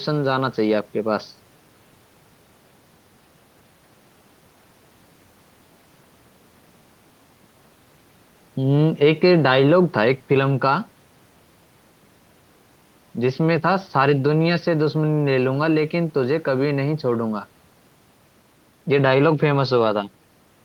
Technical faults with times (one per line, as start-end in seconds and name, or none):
none